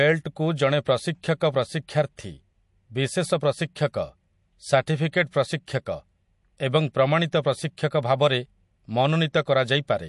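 MP3 compression damage runs throughout the speech: nothing is present above 11.3 kHz, and the sound has a watery, swirling quality with smeared consonant attacks. The likely cause is an MP3 encoder short of bits, plainly audible here and consistent with a rate around 48 kbps. It discards the treble above a fixed cut-off and drops quieter frequency lines, which then flicker in and out between frames, producing the swirl and metallic chirps on the s sounds.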